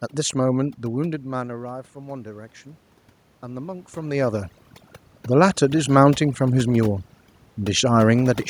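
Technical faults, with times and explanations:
Throughout, overdone noise removal: the noise reduction is pushed so hard that any frequency band near its noise estimate gets cut down, along with quiet speech detail. The room background becomes near silence flecked with twinkling specks.
0.94 to 2.61 s, automatic gain rising: the level reaching the microphone drops by about 17 dB around 1 s as the talker moves away, so the gain control gradually raises its gain by about 4 dB. Voice and background swell together over these 1.7 seconds.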